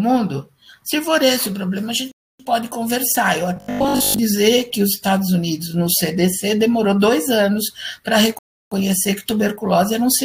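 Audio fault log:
2.12 to 2.40 s and 8.39 to 8.72 s, rebuffering stall. The sound cuts to silence twice, then picks up exactly where it stopped. The player ran out of downloaded audio and waited for more to arrive. Nothing is skipped, so the content stays whole. The first gap adds 0.28 s and the second adds 0.33 s. The clip's timeline stretches by that much. Each gap sounds like a sudden freeze followed by a clean restart.
3.56 to 4.20 s, robotic sound from repeated short buffers. The sound turns into a rigid, metallic buzz at 50 Hz. It still roughly follows the shape of the original. The likely cause is new audio arriving too seldom, so the software keeps replaying its last short chunk to fill the gap. A 50 Hz buzz fits a repeated 20 ms chunk. Most of the real audio here is replaced by repeats and lost.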